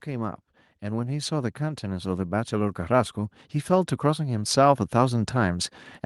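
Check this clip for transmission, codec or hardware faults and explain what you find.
One fault is present: automatic gain rising, running from about 0.05 s through to the end of the clip. The gain control treated the incoming level as too low and kept stepping its gain upward across the whole recording rather than settling. Because it scales everything before it, the speech and the background noise swell together, so the level creeps up steadily over several seconds and the noise floor becomes more prominent as it goes.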